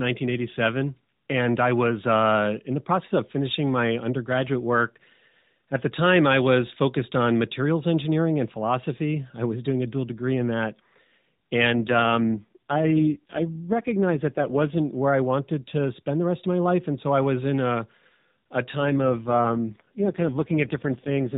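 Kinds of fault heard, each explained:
AMR rate drop: a weakening mobile link pushed the AMR codec to a lower rate, spending bits on error protection instead. From 11.7 to 14.8 s, before "where I wanted to", and from 18.8 s on, the voice turns buzzier and more synthetic, which fits a fall from 12.2 to 4.75 kbps.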